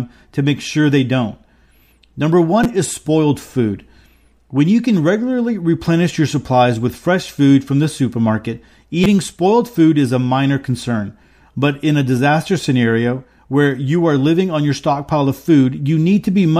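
At 2.64 s, just before "is spoiled food", and again at 9.04 s, between "food from the supermarket" and "spoiled food is a", a brief buzzy click marks a repeated buffer. A roughly 6 ms slice, which fits a 256-sample buffer, plays several times because fresh audio arrived late, dropping about 20 ms of speech.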